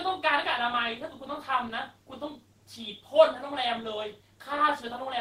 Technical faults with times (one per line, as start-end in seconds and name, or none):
none